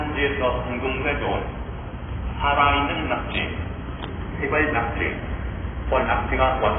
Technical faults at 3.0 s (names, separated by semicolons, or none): AAC compression